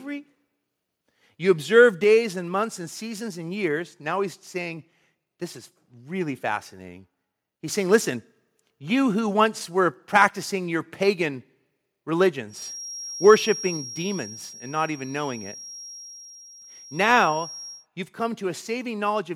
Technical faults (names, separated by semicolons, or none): microphone volume stepped down; microphone volume stepped up; microphone overload; feedback whistle